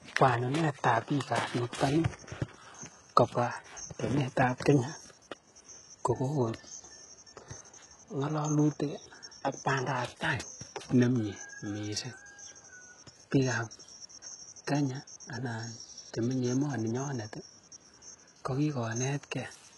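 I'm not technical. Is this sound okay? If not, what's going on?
No. HE-AAC compression runs through the whole recording, from start to finish, and it is heavy. This kind of compression likely saves space by keeping only the lower part of the sound and then faking the treble, copying lower tones upward and roughly reshaping them. Those rebuilt highs don't match the real voice, so s sounds come out gritty, metallic or lispy. Nothing at all reaches above 11.5 kHz.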